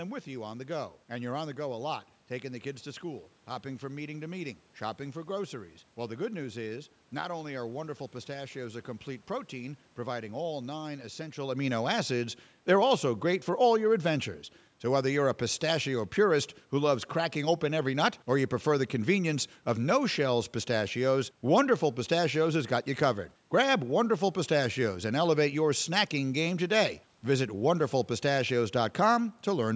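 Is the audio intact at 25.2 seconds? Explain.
Yes, the speech at 25.2 seconds is intact, with no fault to be heard at that moment.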